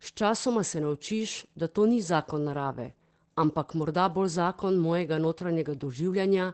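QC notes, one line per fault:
Throughout: Opus voice compression. Speech sounds muffled, slightly hoarse and robotic, with nothing above 8.6 kHz. This fits SILK in wideband mode at around 12 kbps, where the coarsely coded excitation and 8 kHz band limit strip detail and add plainly audible codec roughness.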